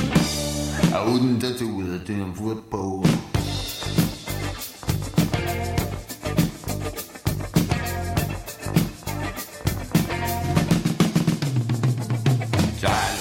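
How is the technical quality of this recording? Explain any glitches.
One real glitch. From 1.07 to 1.42 s there's a sudden gain jump of about 6 dB: sound and background noise leap up together, likely from a gain change applied instantly without any ramp.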